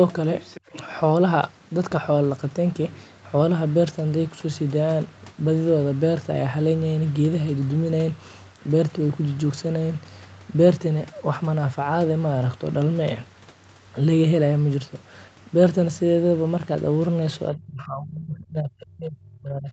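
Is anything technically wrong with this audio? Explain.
Yes, two faults. From 0.4 to 0.61 s, the other side's voice leaks through, faint, about 20 dB below the speech. An incompletely cancelled loudspeaker echo is the likely cause. From 17.51 s to the end, the speech is suppressed in double talk. It dips by around 35 dB at its deepest, likely as the echo canceller turns down both overlapping voices.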